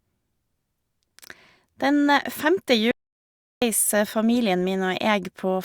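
At 2.91 s the speech cuts off mid-flow and the output goes completely silent until 3.62 s, a gap of about 0.71 s, before the sound picks up again. This is a playback stall: the player most likely ran dry of buffered data or had its audio thread held up, so nothing reached the output until it recovered. The break sounds abrupt rather than like a natural pause, with no fade on either side.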